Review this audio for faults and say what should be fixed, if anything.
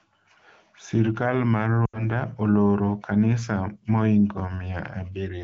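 Lost AMR speech frames occur from 1.86 to 2.07 s, just before "oloro kanisa mohingo". About 80 ms of audio is missing, consistent with four 20 ms frames. The wideband decoder repeats the last good pitch and vocal tract settings at falling gain, so the speech quickly fades to near silence before recovering. Prevent it by improving radio link quality or coverage so frames arrive intact.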